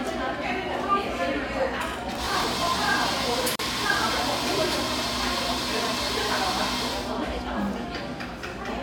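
Processor overload crackle runs from 2.12 to 2.68 s. For just over half a second the sound takes on a gritty, tearing crackle. The processor could not finish its small audio buffers in time and missed deadline after deadline. Each miss replayed a sliver of stale audio with hard edges. The texture of the crackle suggests buffers of roughly 5 ms, with around thirty of them failing across that stretch. The crackle stops once the load eases.

A gap at a join of encoded pieces opens at 3.56 s and lasts 37 ms, until 3.59 s. The sound drops into silence and then resumes exactly where it left off. The codec smears the edges of the gap. The clip was encoded as separate pieces and joined without trimming, so the encoder's start-up delay and the padding in its final frame stayed in as dead air. The join falls where pieces six seconds long would meet.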